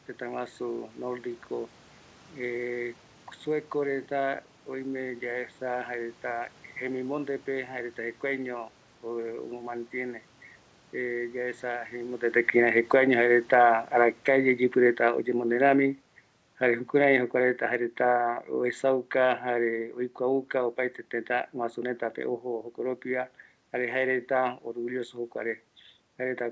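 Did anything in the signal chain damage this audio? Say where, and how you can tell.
Yes. Automatic gain falling, in the call processing stage. From 12.26 to 16.04 s the speech sinks about 6 dB, then again about 6 dB from 16.6 to 20.82 s. The room noise sinks with it. The gain control judged the input too loud, or its background noise too strong, and lowered it slowly.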